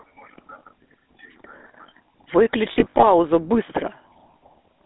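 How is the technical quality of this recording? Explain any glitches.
The recording is degraded by a low-rate phone codec for its whole length, plus one brief burst of damage.

GSM full-rate codec, throughout: a pulse-driven vocal-tract model, consistent with the 13 kbps coder, confines speech to roughly 250 Hz to 3.6 kHz, leaving a plainly buzzy, gravelly roughness.

Lost GSM frames, 2.72 to 3.05 s: short dropouts of about 40 ms at most were filled by repeating the last good frame, giving a brief metallic ring.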